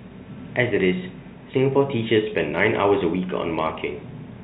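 No technical faults are audible in this speech, and the faint room noise sitting about 48 dB below the voice is part of the recording itself.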